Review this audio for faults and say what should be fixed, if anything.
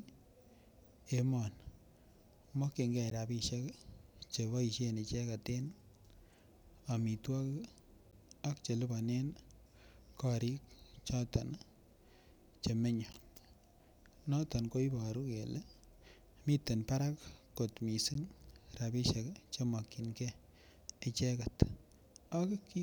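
Short holes cut into the speech at 3.1, 8.11, 13.13 and 18.14 seconds, each about 13 ms of silence, recurring every 5 seconds. This is a gap between chunks: the audio was carried in 5-second pieces, and at each join a sliver of silence was inserted, so nothing is lost but the sound is briefly interrupted. To prevent it, join the chunks seamlessly by trimming codec padding and scheduling each chunk to start exactly where the previous one ends.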